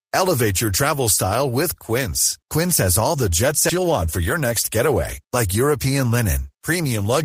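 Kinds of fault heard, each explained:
Skip ahead: Right after "has all the jet", at 3.69 s, roughly 0.7 s of audio is discarded and playback jumps forward with no gap. A stretch was dropped on the way or by the overflowing jitter buffer while later audio waited, so the speech on either side is spliced almost directly.
Jitter buffer speed-up: From 3.78 to 5.46 s the speech runs at 105% speed at unchanged pitch. The receiver trims short pitch-period segments repeatedly to shrink its excess buffered delay, removing about a tenth of a second overall and making delivery sound slightly hurried.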